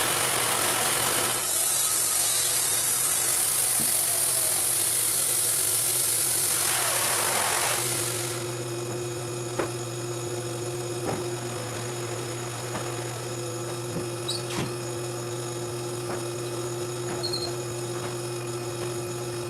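From 1.28 s to 3.28 s the audio switches abruptly, with no gap, to an adaptive stream at a lower bitrate. Content above about 12.2 kHz disappears and codec artefacts thicken, which points to Opus falling from around 64 to 16 kbit/s before recovering.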